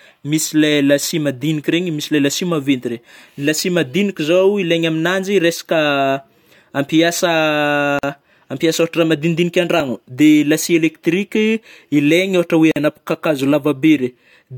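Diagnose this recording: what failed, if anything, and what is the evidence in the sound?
Codec stage: a gap at a join of encoded pieces occurs twice, at 7.99 to 8.03 s (45 ms) and 12.72 to 12.76 s (47 ms). The speech drops out briefly, then resumes where it left off, because separately encoded segments were concatenated with their encoder delay and end padding left in.

Driver or buffer stage: at 9.80 s there is a small forward jump in the speech and no silence. A few milliseconds of audio are missing, most likely a dropped buffer (overrun), where samples were overwritten before the program read them.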